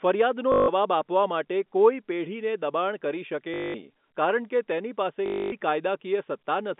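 At 0.52 to 0.68 s, just before "આપવા માટે કોઈ પેઢીને", at 3.54 to 3.74 s, and at 5.26 to 5.52 s after "કારણ કે તેની", packet loss with last packet repeated fills each gap with the same short fragment. Unlike silent dropouts or smooth concealment, it produces a robotic 50 Hz buzz, which fits 20 ms packets, over the band-limited telephone sound.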